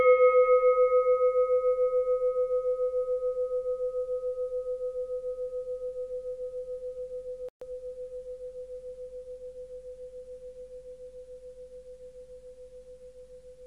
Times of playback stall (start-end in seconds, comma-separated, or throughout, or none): 7.49-7.61